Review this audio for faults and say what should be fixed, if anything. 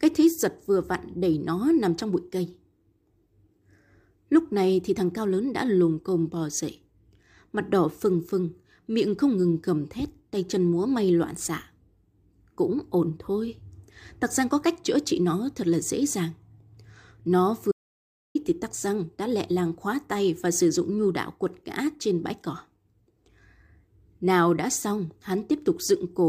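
Audio dropout to silence from 17.72 to 18.35 s: the speech cuts off mid-flow and about 0.63 s of silence follows, with no room tone. The input was likely lost while recording continued writing silence. Secure cables and wireless links, and monitor input meters during capture.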